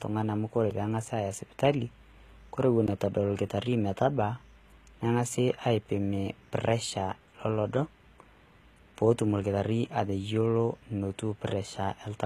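Right from the start and all the way through, the speech carries plainly audible codec damage. The top end sounds bright but synthetic, with s sounds coming out gritty and lispy and the treble not quite sitting in tune with the lower range. That's most likely HE-AAC compression at a low bitrate, something in the region of 20 kbps, where the upper band is rebuilt by copying lower content upward instead of being coded directly.

Then there are two blocks of digital silence. At 0.70 s the audio drops to silence for about 5 ms and snaps straight back, which gives a sharp tick. The length fits a 256-sample buffer that wasn't filled in time. At 2.87 s a longer hole of about 14 ms lands, still brief enough to hear mostly as a tick, with a hard edge on both sides and no fade either way.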